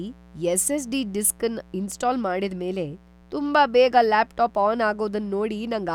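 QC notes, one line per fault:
Throughout, mains buzz: a steady, raspy 60 Hz buzz sits under the speech at roughly 30 dB below it. Sharp switching spikes twice per mains cycle feed in harmonics reaching several kilohertz. That spread of harmonics makes it rasp rather than hum.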